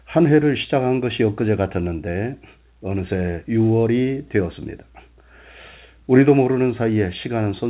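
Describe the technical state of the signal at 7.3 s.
At 7.3 s the speech is intact, with the narrow, telephone-band sound of G.711 coding and no fault at that moment.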